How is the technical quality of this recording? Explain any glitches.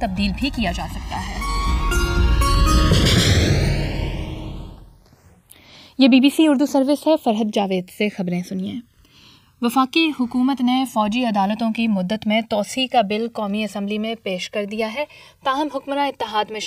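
The recording has one clear technical problem running through its whole length. Channels drifting apart: the two sides sit on clocks about 200 ppm apart, so their offset creeps to roughly 2 ms. In mono, comb notches sweep slowly, giving slow flanging, seen on a spectrogram as drifting diagonal notch bands.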